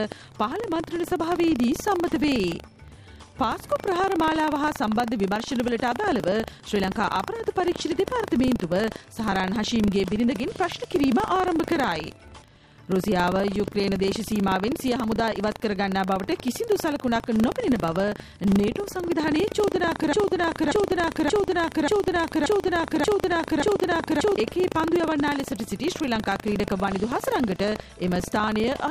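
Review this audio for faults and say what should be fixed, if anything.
A steady robotic buzz at 25 Hz runs under the sound throughout: buffer tearing. Writer and hardware read pointer have slipped, so a small slice of each 40 ms buffer replays audio about 70 ms old.

From 20.13 to 24.38 s, a 0.58 s fragment repeats seven times back to back, a broken-record loop. The player or stream likely stalled and resent its last fragment, and the intended audio is lost.

To prevent both, keep the write pointer safely ahead of the hardware read position, and detect stalls so the output drops to silence instead of resending stale fragments.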